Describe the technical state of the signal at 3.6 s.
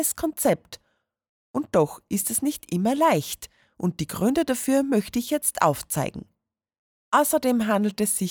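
At 3.6 s the signal is intact, with no dropout, click, distortion or other fault to be heard.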